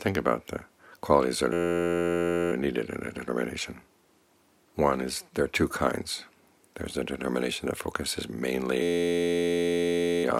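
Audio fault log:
1.53–2.52 s and 8.82–10.24 s, system hang loop: The system stalled while playback kept cycling one tiny buffer. An 11.61 ms slice repeats exactly, which fits a 512-sample buffer. This gives a steady buzz at 86.1 Hz. Hardly any audio goes missing afterward.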